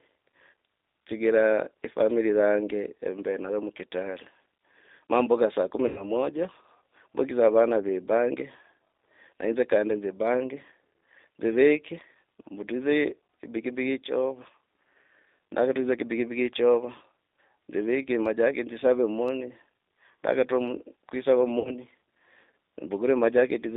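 Throughout, the G.729 codec squeezes the speech into 8 kbit/s. It sounds rough and synthetic, and a spectrogram shows energy confined to roughly 250 Hz to 3.7 kHz. From 5.88 to 6.04 s, just after "mbuka saa kumi", and again from 21.59 to 21.78 s, VoIP packet loss concealed by the speech codec replaces the missing audio (about 90 ms, which fits three 30 ms packets, then about 60 ms) with a buzzy tone or coloured noise extrapolated from the last pitch and filter. On a spectrogram this appears as smeared, fading energy, and on the waveform as a decaying signal.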